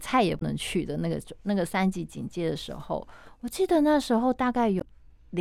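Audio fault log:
0.38–0.42 s and 4.77–4.82 s, damaged data in a compressed stream: two short glitches, about 40 and 50 ms long, break into the speech where corrupted bytes left frames undecodable. The decoder loses sync and outputs garbage until it locks onto the next valid frame header.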